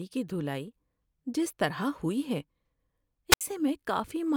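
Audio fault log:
3.30–3.41 s, wireless microphone squelch dropout: the radio link from the speech mic fades out, hiss creeps up briefly, then the receiver's squelch kicks in and mutes for about 71 ms, leaving a near-silent hole before the voice comes back.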